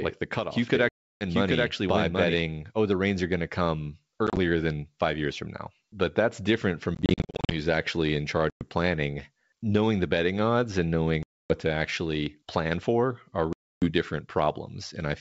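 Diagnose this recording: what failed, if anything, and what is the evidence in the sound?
From 0 to 2.34 s the speech is heard twice: a second, equally loud copy runs roughly 0.7 s behind, with no decay, and cuts off abruptly at 2.34 s. This doubled audio track likely comes from a second, slower capture path. On a spectrogram the same harmonic pattern repeats about 0.7 s later.

Packet loss on an ADPCM call, a network fault, punches silent holes at 0.89–1.24 s, 4.27–4.38 s (scattered), 6.95–7.52 s (scattered, between "that's different from" and "who's actually in"), 8.50–8.63 s, 11.23–11.56 s (after "the betting odds and") and 13.53–13.91 s (after "plan for"). The waveform drops to flat, hard-edged gaps. Afterwards the resynchronising decoder returns slightly distorted, and it settles within tens of milliseconds.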